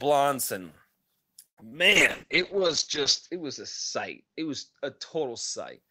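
Speech carrying four network-related faults. From 1.46 to 1.66 s there is a call audio freeze: the last sound is stretched into a fading buzz or hiss, then about 90 ms of silence, before the speech resumes where it left off with nothing lost. This pattern is likely caused by delayed packets draining the jitter buffer, and it adds roughly 110 ms of delay. Short concealed packet loss occurs at 1.60 to 1.62 s and 1.69 to 1.73 s. About 10 ms and 20 ms of audio never arrived, and the decoder bridged each gap by extending the preceding sound, leaving a brief smear or wobble. At 1.89 s a call bitrate drop begins. The encoder falls from 32 to 11 kbps and its bandwidth narrows from 20 kHz to 8 kHz, so the speech turns muffled and rough, worst for about 1.4 s, until the drop ends at 5.83 s.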